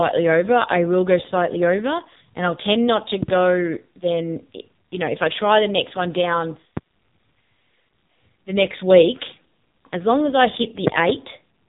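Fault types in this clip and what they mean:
AMR narrowband mobile codec: The speech has gone through a low-bitrate mobile codec, at a rate that fits roughly 5.9 kbps AMR-NB, which rebuilds the voice from a coarse vocal-tract model. Nothing above about 3.8 kHz survives, and the heavy coding leaves the voice thin, buzzy and synthetic throughout.
Loud pop: A sudden voltage step, likely from a plug, switch, static discharge or driver glitch, was added to the signal. It is heard twice as a double pop, about 15 dB above the speech, right after "i'll tend not to" near 3.2 s and after "as long as I" near 10.9 s.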